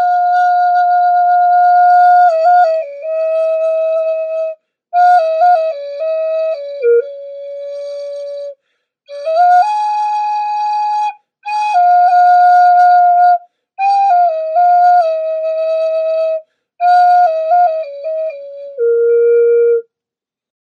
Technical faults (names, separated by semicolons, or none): hard clipping